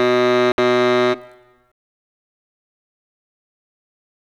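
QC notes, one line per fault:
0.52–0.58 s, Bluetooth dropout: the music cuts to silence for about 61 ms, then resumes further along, as if it kept playing. This is likely packets failing to reach the headphones in time, consistent with about three lost packets. The waveform shows a flat gap; the spectrogram shows a clean vertical blank band.
1.72–4.28 s, truncation distortion on a fade: as the fade sinks toward the smallest level step, the music turns gritty, and from 2.19 s to the end it is at its worst, consistent with an undithered 8-bit stage. The waveform shows coarse square steps, and the spectrogram shows broadband speckle near the floor.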